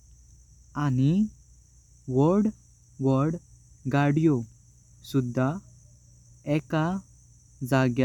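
A short bit of speech, and nothing technically wrong turns up anywhere in it.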